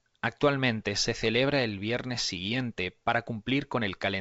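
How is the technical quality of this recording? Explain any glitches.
No glitches to report: the speech sits on a G.722 wideband path at 64 kbit/s, with nothing above 7.7 kHz and any coding damage at most faint.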